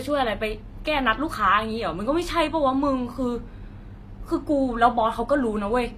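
Speech whose treble sounds gritty and lispy on s sounds all the way through, with nothing above 20.7 kHz, likely from HE-AAC compression rebuilding the highs at a low bitrate, near 24 kbps.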